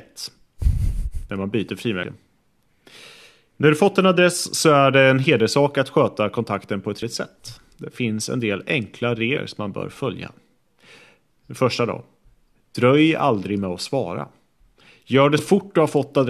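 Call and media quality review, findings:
Compressed frames skipped at 2.02 s after "man byter", 7.01 s after "sköta kontakten på ett", 9.36 s between "finns en del enkla" and "som man bör följa", and 15.37–15.39 s. The speech jumps ahead about 100 ms at 2.02 and 15.37 s, and about 150 ms at 7.01 and 9.36 s. Each jump is roughly five to seven whole 23.2 ms frames, which points to lost or rejected packets at the decoder.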